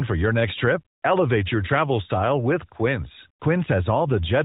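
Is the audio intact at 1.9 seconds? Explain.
Yes, at 1.9 seconds the audio is intact, with nothing there beyond the light, narrowband character of the AMR-NB mobile codec running at 12.2 kbps.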